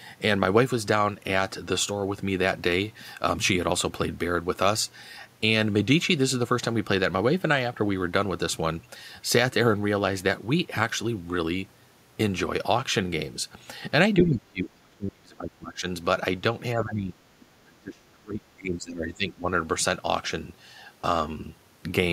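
From 14.23 to 15.86 s the talker's speech is suppressed in double talk, sinking by roughly 30 dB for most of that stretch. The likely cause is an echo canceller that, with both sides talking, treated the talker as loudspeaker echo and pulled the whole microphone signal down. A shallower dip of roughly 15 dB follows at 16.75 to 17.15 s. Unlike a dropout, the gaps track the overlap and the level comes back once it ends.

At 17.4 s the other side's voice leaks through for a brief scrap, sitting roughly 30 dB below the talker's level. This is likely residual loudspeaker sound the canceller failed to remove. It differs from suppression because something extra is added rather than taken away. A faint second voice appears instead of the talker dimming.

From 17.77 to 19.47 s the speech is suppressed in double talk again, dropping by roughly 30 dB, once more likely because the canceller ducked the talker during overlap.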